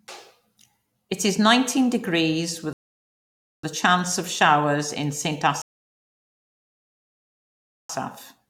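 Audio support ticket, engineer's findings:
Rebuffering stall, speech playback: dead silence 2.73–3.64 s (0.90 s added) and 5.62–7.89 s (2.28 s added). The player buffer ran dry and playback waited for data, then resumed at the same point. Waveform shows flat gaps, spectrogram blank columns, with nothing missing either side.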